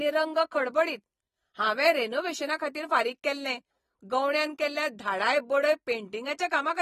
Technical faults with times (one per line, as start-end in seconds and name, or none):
0.00-6.81 AAC compression